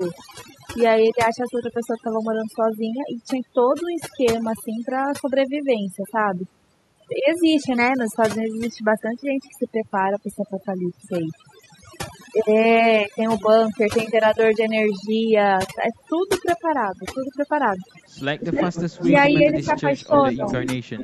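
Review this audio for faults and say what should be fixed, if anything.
Overdone noise removal runs through the whole clip. The background sits near silence, with faint twinkling specks. A noise reducer set too strong is cutting single frequency bands whenever they come close to its noise estimate. Quiet parts of the speech fall into that range and vanish with the noise. Prevent this by lowering the suppression strength, or by recording in a quieter room so less reduction is needed.

Speech suppressed in double talk occurs four times near the end. It runs from 18.4 to 18.61 s, dipping by about 15 dB. It returns from 19.02 to 19.39 s at about 5 dB, from 19.57 to 20.15 s at about 15 dB, and from 20.35 to 20.69 s at about 10 dB. The speech dips and thins in short pieces. The likely cause is an echo canceller that could not tell this talker from the loudspeaker echo while both sides spoke, so it turned everything down. 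Prevent this by tuning the canceller's double-talk detection so near-end speech is kept.

Echo leak overlaps those dips. A delayed copy of the speech arrives 269 ms behind it. It runs from 18.45 to 19.17 s at about 10 dB below the speech, and from 19.38 to 20.72 s at about 5 dB below. It returns from 20.97 s to the end at about 15 dB below. This likely comes from a far-end loudspeaker whose echo canceller let part of the microphone pickup pass back. Prevent this by using a headset on that side, or by improving its echo cancellation.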